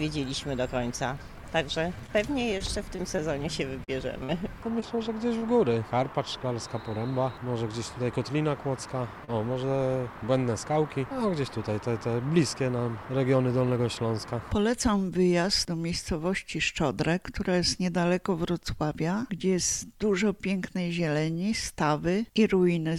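Scattered short gaps from 2.06 to 6.16 s: around ten lost or late packets, each bridged by extending the preceding sound, leave brief ticks and smears totalling about 120 ms missing. A short stall from a late packet at 9.25 to 9.30 s: the buffer ran dry and the last sound was held for 34 ms, adding that much delay without losing anything. A jitter buffer slow-down from 9.58 to 9.78 s: repeated pitch periods add 38 ms, so the audio drags at 85% speed while keeping its pitch. A jitter buffer speed-up from 13.25 to 13.79 s: roughly 70 ms of short pitch-period slices are cut out, pushing the audio to 111% speed so it sounds briefly hurried.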